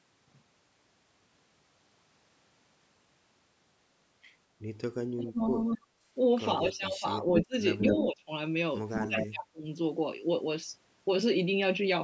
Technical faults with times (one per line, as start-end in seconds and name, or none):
5.14-5.41 speech suppressed in double talk
5.74-5.88 speech suppressed in double talk
6.63-7.55 speech suppressed in double talk
7.36-7.44 echo leak
7.78-8.05 echo leak
7.91-8.30 speech suppressed in double talk
8.91-9.26 echo leak
9.07-9.65 speech suppressed in double talk